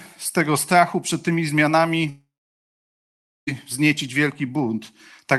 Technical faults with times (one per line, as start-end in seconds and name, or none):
2.09-3.49 long network dropout